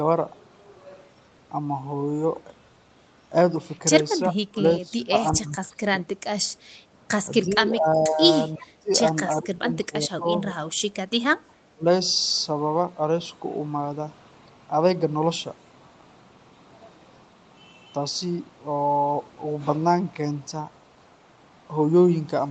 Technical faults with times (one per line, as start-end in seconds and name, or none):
4.30-6.05 speech suppressed in double talk
7.46-8.21 speech suppressed in double talk
7.51-7.55 echo leak
8.57-8.65 echo leak
8.58-8.90 speech suppressed in double talk
9.40-10.58 speech suppressed in double talk
11.47-11.86 speech suppressed in double talk